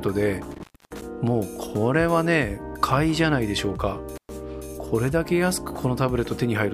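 A loose cable or plug in the signal path is opening and closing, an intermittent contact fault that strikes twice. Between 0.51 and 1.02 s the connection breaks for about 0.28 s, and between 4.16 and 4.29 s it breaks again for about 0.12 s. Each time the audio drops out abruptly, with crackle at the edges as the contact scrapes open and shut, leaving faint hiss while the line is broken.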